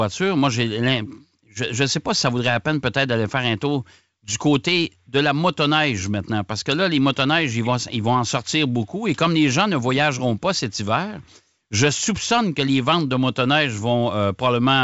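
Nothing stood out on listening to this speech recording, which has the wideband telephone sound of G.722 coding at 64 kbit/s, with nothing above about 7.7 kHz.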